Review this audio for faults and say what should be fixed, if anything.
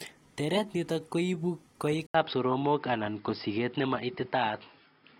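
At 2.06 s the speech drops out for about 80 ms and then continues through to the end sounding duller and boxier, with nothing above 5.2 kHz, a level shift of roughly 5 dB, and a faint new noise floor sitting well below the speech. That pattern is likely an input switched to a poorer device mid-recording, such as a fallback microphone or a headset's narrowband call profile. Prevention: lock the input device and its profile before recording and disable automatic device switching.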